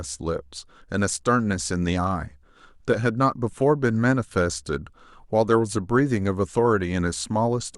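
No technical faults are audible.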